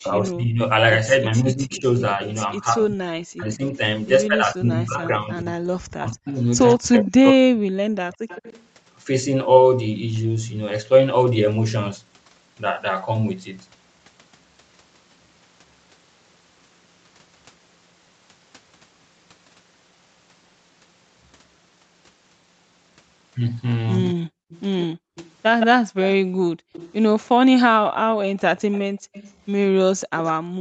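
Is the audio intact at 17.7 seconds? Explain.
Yes, the speech at 17.7 s comes through intact, with no dropout, glitch or other fault at that moment.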